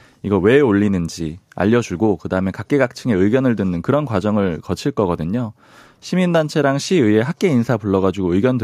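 No technical faults can be heard anywhere in the recording.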